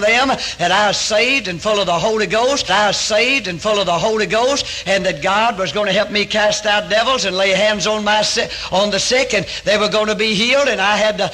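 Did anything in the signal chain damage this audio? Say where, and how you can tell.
Yes, at the streaming playback stage a stream segment was repeated. From 2.65 s to 4.65 s the audio jumps back and plays a stretch of about 2 s a second time, with a small blip where the join falls. The player fetched or queued the same segment twice. A buffer stutter repeats only a few milliseconds over and over. Here a whole segment-sized block of programme recurs once, making the clip about 2 s longer.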